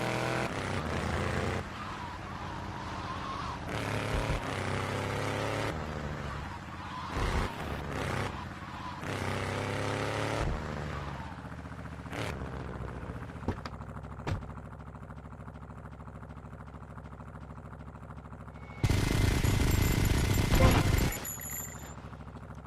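From 4.81 s to 11.69 s a call bitrate drop coarsens the audio, consistent with the encoder falling from about 64 to 15 kbps. At the lowest point, lasting about 2.1 s, the highs are cut off and the sound turns rough and muffled before recovering.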